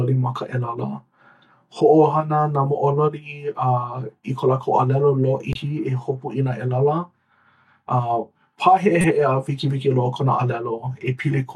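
Speech, with corrupt frames decoded at two points: short bursts of misplaced spectral energy at 5.53–5.58 s and 9.01–9.04 s, heard as chirps, squeaks, blips or bursts of noise. Their lengths point to roughly two damaged frames and one. The second burst is louder, peaking near -5 dBFS.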